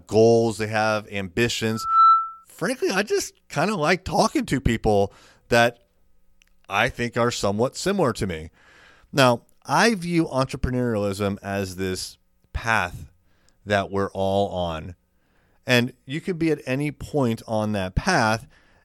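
At 1.70 s a loudspeaker feedback squeal breaks into the speech. It is a single tone at 1.3 kHz. It swells over roughly a third of a second, then holds at around 10 dB above the speech until it stops at 2.45 s. The microphone is picking up the loudspeaker it feeds. At this one frequency the loop gain goes above one, so the tone keeps feeding itself and grows until the amplifier limits it.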